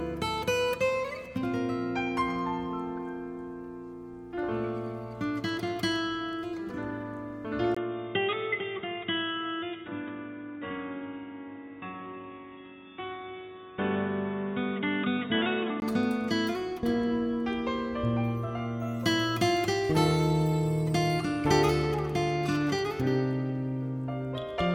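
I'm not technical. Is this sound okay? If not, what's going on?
No. From 7.7 to 15.8 seconds the sound turns dull and boxy, a bit quieter, with a faint new hiss and a tiny gap at the switch. This is likely an input switched to a poorer device, which loses everything above 3.8 kHz.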